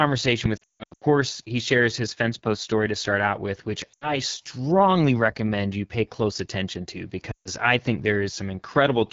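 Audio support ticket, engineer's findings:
AMR wideband (HD Voice) codec, full clip. Steady rough, raspy speech with noise-like fill at the top of the band, consistent with the AMR-WB 8.85 kbit/s mode. Unlike the frame losses, it is constant rather than in bursts, because the low-rate model coarsens every frame.

Lost AMR speech frames at 0.57–1.04 s (scattered, longest gap about 160 ms), 3.94–4.17 s and 7.31–7.49 s. Speech warbles and fades. The decoder is repeating the last good pitch and vocal tract settings at falling gain. Voice comes back weak or rough for a moment.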